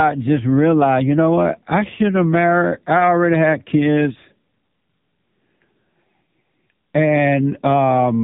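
From start to end the speech carries AMR narrowband mobile codec damage, and it is heavy. Nothing passes above about 3.8 kHz, and the pulse-driven vocal-tract model leaves the voice buzzy and synthetic, which fits one of the lower AMR-NB bitrates, around 6.7 kbps.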